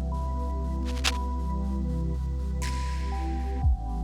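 The audio carries a burst of cable scratch noise from 0.83 to 1.17 s. Dense, uneven scratching and rustling sits over the sound there, only slightly quieter than it. The likely cause is a worn cable or connector being moved, its contact resistance jumping rapidly.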